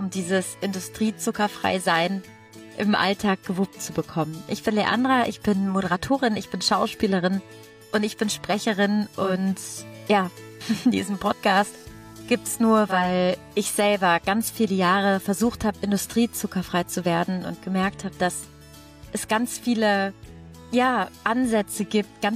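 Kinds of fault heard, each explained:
Digital radio blending to analogue: From about 9.1 s to 13.2 s a faint hiss rises under the sound, sitting well below the programme, and the level shifts by about 1 dB. The change fades in and out smoothly over roughly 360 ms each way rather than switching abruptly. It happens because the hybrid receiver lost its digital signal, cross-faded to the station's FM broadcast, then blended back once the digital stream returned.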